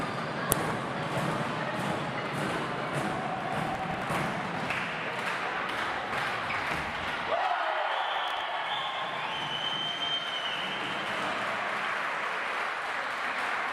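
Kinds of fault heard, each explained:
Uninitialised buffer: at 0.52 s a single crack is heard, lasting only about 0.73 ms. Memory that held no audio yet was played out as samples, and a block this short, fitting a 32-sample buffer, gives a crack rather than a burst of noise.
Processor overload crackle: from 3.67 to 4.34 s and again from 8.16 to 8.41 s, gritty crackle rides on the audio. Repeated missed deadlines each skipped a short stretch, pointing to buffers near 3 ms, with around twenty misses first and around seven later.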